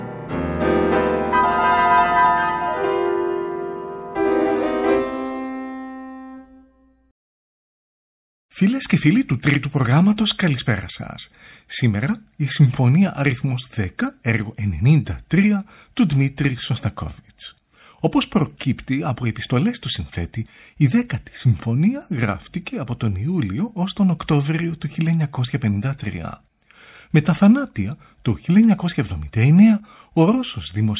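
No technical fault can be heard anywhere in the recording. Nothing at any point calls for comment.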